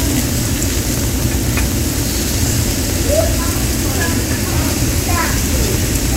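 Periodic USB or driver dropouts run from 0.11 s to 6.12 s through this everyday-sound recording: every 0.062 s, roughly 2 ms of audio is skipped outright. Around a hundred evenly spaced ticks result, as a blocked bus or driver repeatedly drops short stretches of signal.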